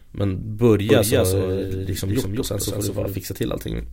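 A second copy of the audio path is being mixed in out of step, most likely from a slower capture route or an edit that leaves two copies overlapping, so this speech clip carries a doubled audio track from 0.90 s to 3.18 s. The copy trails by roughly a fifth of a second at a level a few decibels below the original, with full bandwidth and no reverberant tail. It switches in and out abruptly, leaving a flat, stuttering echo behind every syllable.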